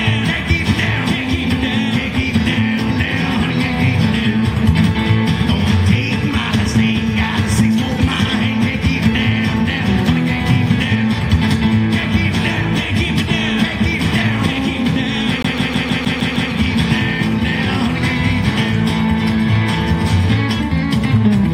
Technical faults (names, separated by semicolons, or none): CD stuck on one turn